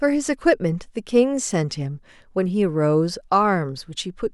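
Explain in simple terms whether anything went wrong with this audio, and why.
Two short ticks stand out in this speech clip, at 0.69 s and 1.52 s. Each is a bit error spike: a single sample was corrupted when one binary digit in the stored or transmitted number flipped, throwing that value far off for an instant before the next sample returned to normal. Because the disturbance lasts only one sample, it sounds like a sharp, dry click covering all pitches, with no connection to the speech around it.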